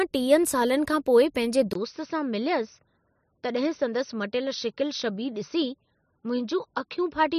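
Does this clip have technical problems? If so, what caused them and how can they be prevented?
Yes. At 1.73 s the speech cuts out for about 20 ms, then continues for the rest of the clip duller and a little quieter, with nothing above 6.1 kHz and a faint new background noise well below the voice. This is likely an input switched to a poorer device: the recording system dropped its original microphone for a narrower-band one, such as a headset in call mode. Locking the input device in the recording software before starting prevents this.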